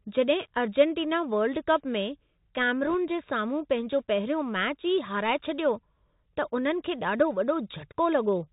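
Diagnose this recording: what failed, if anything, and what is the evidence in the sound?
The codec stage shows a Bluetooth CVSD headset codec across the whole clip. The speech is band-limited with nothing above 4 kHz, sibilants come out scratchy, and a fine granular hiss sits under the voice. Louder high-frequency passages distort where the one-bit delta modulator's adaptive step cannot keep up with the waveform. That behaviour fits a 64 kbps CVSD stream, and the damage is plainly audible.

On the network link, there are bit errors on the Bluetooth voice link from 2.87 to 2.94 s. That stretch carries a brief rushing, crackly noise over the speech, with no sharp clicks. Because each CVSD bit only nudges the output up or down by one adaptive step, flipped bits produce diffuse noise that decays quickly rather than loud impulses. The density of the crackle points to an error rate of roughly 0.7 percent across a short burst of the stream.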